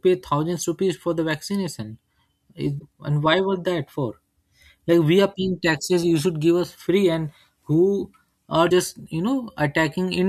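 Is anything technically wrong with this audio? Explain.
Yes. The speech has damaged data in a compressed stream twice: at 2.76–2.83 s, just before "and why", and at 8.66–8.72 s, after "who are". Corrupted frames make the decoder lose sync, causing brief glitches.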